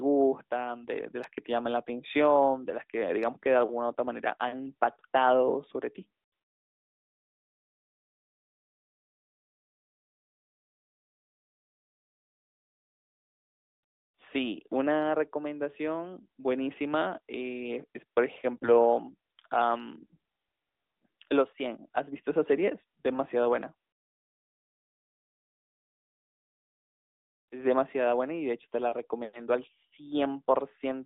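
AMR bit errors strike at 18.57 to 18.70 s and 22.10 to 22.22 s. Corrupted less-protected bits misplace excitation pulses. The speech briefly turns hoarse, scratchy and gargly.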